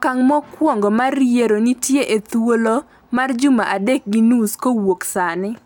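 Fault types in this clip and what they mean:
No fault types are present in this clip.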